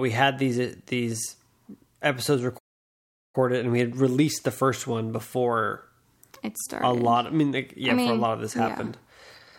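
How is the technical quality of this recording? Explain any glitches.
The speech has one clear glitch, a playback stall. At 2.58 s it cuts to silence mid-flow for about 0.76 s, resuming at 3.35 s with "and we had released". The likely cause is the player running out of buffered data or its thread being blocked.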